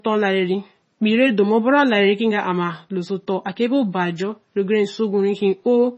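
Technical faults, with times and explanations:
Throughout, MP3 compression: the encoder, likely starved of bits at a rate that fits about 24 kbps, has cut everything above 7.9 kHz and drops weak frequency lines frame by frame, so the speech sounds dull, watery and swirling, with smeared consonant attacks.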